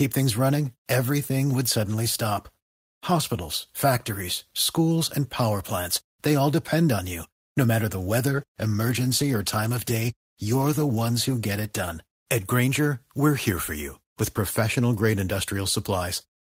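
Right after "matter the", at about 8.39 s, there's a call bitrate drop: the call's bandwidth estimate fell and the encoder was told to spend far fewer bits, so the speech gets coded more coarsely. It sounds like the rate went from around 32 kbps to around 17 kbps and sat at that low level for roughly 3.6 s. It recovers at about 12.03 s, well before the clip ends.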